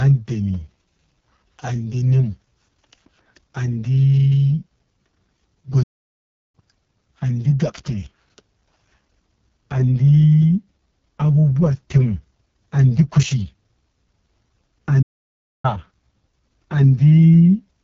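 The speech here has been coded with the AMR wideband (HD Voice) codec at a very low rate. The vocal tract model is starved of bits, so the voice comes out rough and raspy, which fits the codec's lowest 6.6 kbit/s mode. The band stops at about 7 kHz, and the top strip above the modelled range is filled with shaped noise rather than real detail. There are also two playback stalls, most likely where the player ran dry of data or its thread was held up. The output drops to silence in mid-flow from 5.83 to 6.55 s, a gap of about 0.71 s, and again from 15.02 to 15.65 s, about 0.62 s. Each time the speech breaks off abruptly and resumes after the pause.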